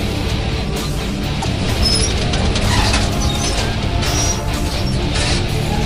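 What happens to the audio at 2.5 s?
Nothing goes wrong at 2.5 s: the audio carries straight through that moment with no dropout, click or distortion.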